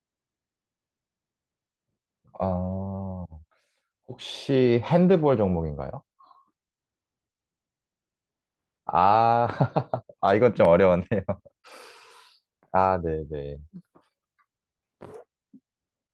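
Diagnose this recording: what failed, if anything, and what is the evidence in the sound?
At the network stage, packets went missing and the decoder replayed the low-bitrate backup copies carried in the following packets, Opus in-band error correction, so there are no gaps. Instead, short stretches sound rougher and noisier: 2.63–2.73 s (60 ms), 4.73–4.79 s (40 ms), 9.95 s, 11.66–11.72 s (40 ms) and 13.06 s.

Also at the network stage, about 20 ms of audio arrived too late and had no backup copy. This short concealed packet loss shows at 11.61–11.66 s, where the receiver extended the preceding sound to fill the hole, heard as a brief smear or wobble. Rougher error-correction audio follows immediately after it.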